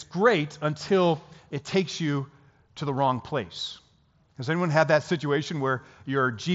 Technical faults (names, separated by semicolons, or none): none